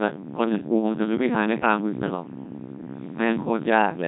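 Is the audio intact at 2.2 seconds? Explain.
No. The Codec 2 vocoder affects the whole clip, including 2.2 s. Its heavy, robotic buzz suggests a rate near 1.6 kbit/s; the spectrogram shows smeared harmonic stripes rebuilt from sine waves.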